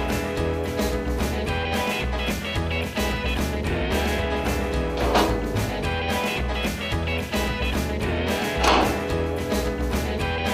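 No technical faults can be heard anywhere in the recording, and the signal stays steady and intact throughout.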